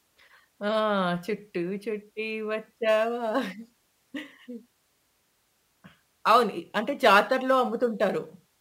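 From about 2.89 s to the end, the speech picks up a gritty, inharmonic fizz riding on louder and brighter moments. That's crude rate conversion, with samples simply repeated rather than filtered, which fits a 44.1 kHz to 48 kHz jump. The error sits roughly 25 dB below the speech.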